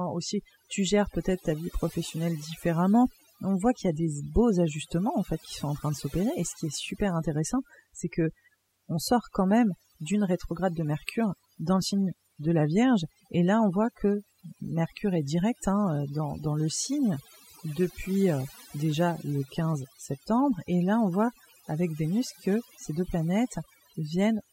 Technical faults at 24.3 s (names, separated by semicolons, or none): overdone noise removal